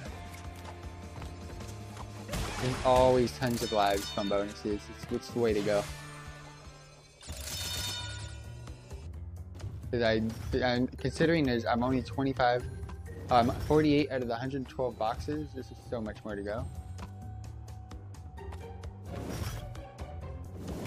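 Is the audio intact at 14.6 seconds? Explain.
No. At 14.6 seconds the audio sits inside a sudden gain jump running from 14.03 to 16.58 s, most likely a digital gain setting applied between one sample and the next with no ramp. The level drops by about 4 dB at 14.03 s and stays down until 16.58 s. The sound and its background noise fall together, so the whole signal steps down abruptly rather than fading.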